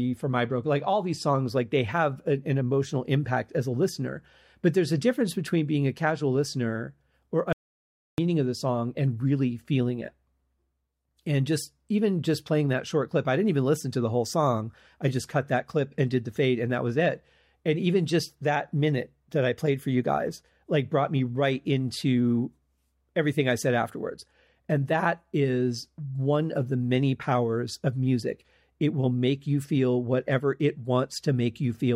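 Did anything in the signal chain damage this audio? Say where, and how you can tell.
Yes, an audio dropout to silence at the input stage, from 7.53 to 8.18 s, after "a casual listener or" and before "of the song and". The speech cuts off mid-flow and about 0.65 s is lost. Dead silence with no room tone, unlike a natural pause, points to a likely lost input link while recording continued.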